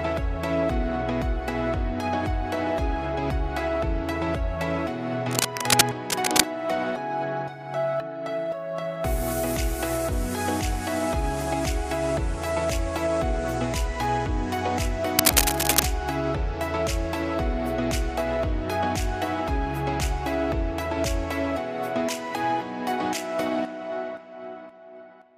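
From 5.31 to 6.46 s there's a burst of cable scratch noise, roughly as loud as the sound itself, and again from 15.17 to 15.85 s, a bit hotter at about 5 dB above it. Both are dense, ragged rustling, likely a worn cable or connector being moved.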